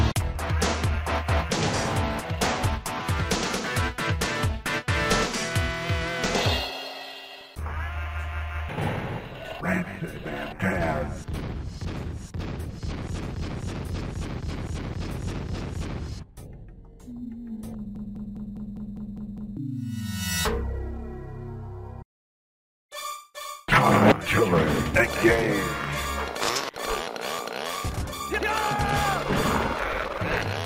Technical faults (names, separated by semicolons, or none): broken-record loop